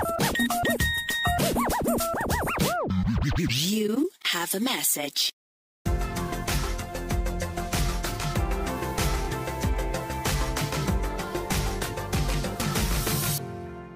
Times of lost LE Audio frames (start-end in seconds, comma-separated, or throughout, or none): none